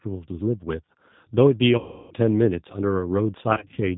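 Throughout, the speech runs through the G.729 codec, rebuilt from a vocal tract model and a few pulses per frame, which fits an 8 kbit/s stream. Nothing above 4 kHz survives, and the damage is plainly audible as a rough, slightly synthetic edge.

From 1.78 to 2.14 s, VoIP packet loss concealed by the speech codec sets in. About 330 ms of audio never arrived, so the decoder stretched its last frame into a buzzy tone or coloured noise that fades. From 3.53 to 3.80 s, scattered short losses, none longer than 30 ms, leave the speech weak or distorted.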